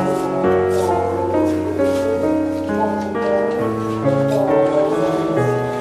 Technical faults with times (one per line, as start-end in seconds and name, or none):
none